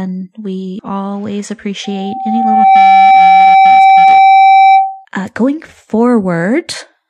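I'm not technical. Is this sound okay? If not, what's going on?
No. At about 0.75 s there are compressed frames skipped. The file stores the sound in small packed chunks, here each about 46 milliseconds long, and a couple of them were missing or rejected by the player as damaged. The speech jumps ahead by roughly a tenth of a second.

From about 1.84 s to 5.05 s there is a loudspeaker feedback squeal. A microphone is picking up the very speaker it is feeding, so the sound goes round and round, getting louder each time at one pitch, here 772 Hz, a steady mid-high whistle. It swells over about a second until it sits well above the speech, then holds as a piercing tone until it stops.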